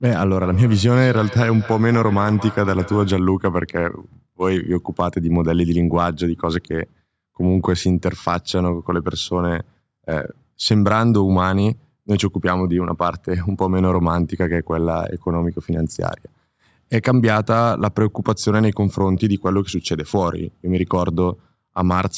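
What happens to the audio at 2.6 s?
At 2.6 s the audio is inside a stretch of feedback echo between two devices that runs from 0.43 to 3.31 s. Two devices on the same call share a room, so one replays what the other's microphone captured, and that microphone picks it up again. Neither echo canceller removes the other device's playback. Each sound returns at a steady interval of about a fifth of a second, peaking about 16 dB below the speech.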